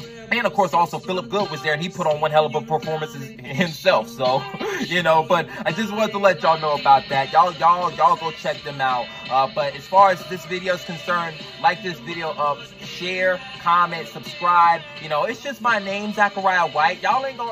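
From start to finish the audio carries channel delay (comb filtering): one channel arrives around 5 ms behind the other, and when the two are summed to mono, the shared content cancels at evenly spaced frequencies, the first near 100 Hz and then every 200 Hz or so above it. The result is a hollow, phasey colouration. Unlike flanging, the notches never sweep, and unlike room reverb, no decaying tail follows the sound.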